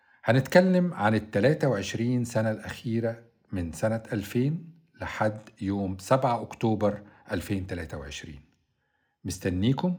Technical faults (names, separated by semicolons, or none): none